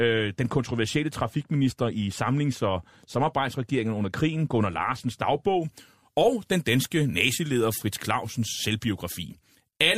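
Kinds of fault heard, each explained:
Pre-emphasis left on: the treble lift applied before recording or transmission was never undone by the matching de-emphasis on playback, so the high end stays exaggerated. From 5.62 s to the end of the speech, the top rises to about 13 dB above the 1 kHz level by 10 kHz, a slope that fits the 75-microsecond FM curve. The sound turns abruptly thin and bright, with hard, hissy sibilance.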